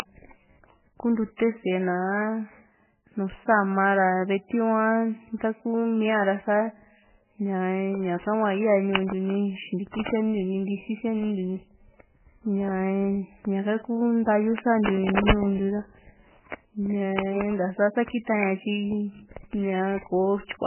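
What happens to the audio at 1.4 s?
Pre-echo from 1.37 to 1.39 s: the codec spreads quantisation noise across its block, so a short hiss leads the attack by about 29 ms and softens it. Throughout, nothing is heard above 3 kHz and the sound is heavily watery and swirly, likely from MP3 compression at a very low bitrate such as 8 kbps.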